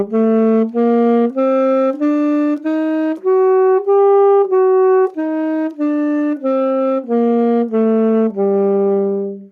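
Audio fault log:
No playback fault is audible anywhere in the recording.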